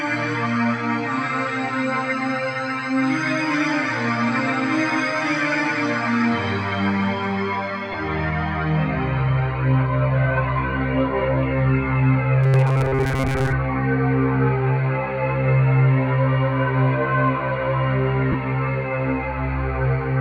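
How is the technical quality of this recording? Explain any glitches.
The recording has three audible glitches: two brief dropouts and one stretch of robotic buzzing.

Lost LE Audio frames occur at 7.92 to 7.94 s and 18.32 to 18.35 s. Gaps of 15 ms and 22.5 ms, which fits two and three lost frames, were concealed with sign-randomised spectra, leaving short noisy smears.

From 12.44 to 13.53 s there is robotic sound, likely from repeated short buffers. Looping roughly 7.5 ms segments, with much of the audio skipped, imposes a rigid, metallic 134 Hz buzz.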